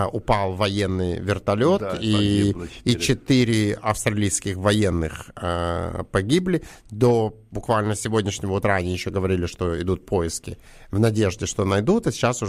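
From 2.0 s to 6.46 s, just after "упал военный вертолет да", the resampler restarted on every block. The sample-rate converter, which fits a change from 44.1 kHz to 48 kHz, processed each 20 ms block in isolation. At every block edge it lacked the true neighbouring samples, leaving a small error at each boundary. The errors recur at 50 Hz, the block rate, and are heard as a regular tick pattern running under the speech, present only while there is signal.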